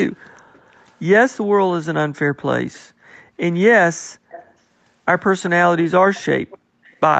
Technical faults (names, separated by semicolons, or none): background gated by the echo canceller; echo leak